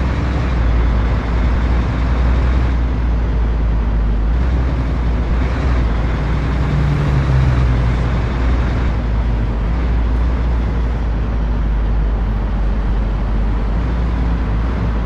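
No technical faults are audible anywhere in this audio.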